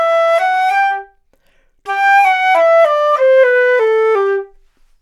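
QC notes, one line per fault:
0.80 to 4.42 s, clock slip clicks: faint, regular ticks recur about once a second, around five in all. Each is a tiny break in the waveform where a single sample is dropped or repeated. The likely cause is two devices running on separate, unlocked clocks, roughly 20 ppm apart. The timing error builds steadily until it reaches one whole sample, then slips. That constant drift is why the ticks are so evenly spaced.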